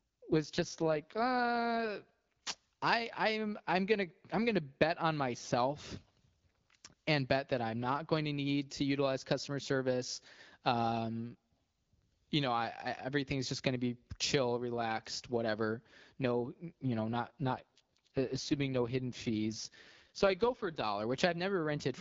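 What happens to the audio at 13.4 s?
At 13.4 s the speech carries on intact, with only the light, even coding character of the AMR-WB wideband path at 12.65 kbit/s.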